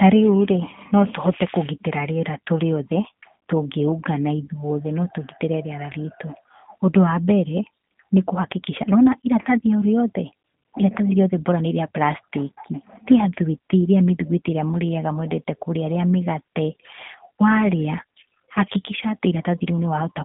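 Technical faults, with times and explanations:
Throughout, G.729 codec: the speech has the rough, slightly synthetic quality of a low-rate VoIP codec, consistent with G.729 at around 8 kbit/s, which rebuilds each short frame from a vocal tract filter, a pitch predictor and a few pulses. Only a telephone band of about 150 Hz to 3.6 kHz comes through. On a spectrogram, energy stops abruptly near 3.8 kHz with nothing above. Harmonics look smeared.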